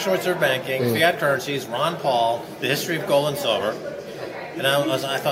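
No technical faults can be heard anywhere in the audio.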